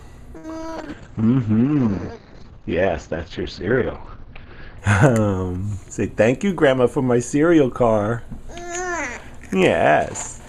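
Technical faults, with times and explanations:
0.37–0.74 s, repeated packet loss (robotic sound): five separate holes open in quick succession, the longest about 62 ms, and about a third of this short stretch is concealed rather than received. The receiver fills each gap by extending the last bit of sound it had, and because the next loss arrives before the audio settles, the result is choppy with small pieces simply missing.
0.78–4.85 s, call bitrate drop: the encoder's rate falls from 128 kbps to 8 kbps and stays at the bottom for nearly 4 s. With so few bits the codec quantises coarsely and narrows the audio band from 20 kHz to about 6 kHz, so the top end vanishes and the sound turns dull and rough until the rate climbs back.
5.82–6.71 s, jitter buffer speed-up: the receiver is holding more audio than it wants and trims it by cutting out short pitch-period-sized slices, roughly 70 ms in total. 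Playback runs at about 106% speed over this span while the pitch stays the same, so the sound feels slightly hurried and its timing tightens unnaturally before returning to normal pace.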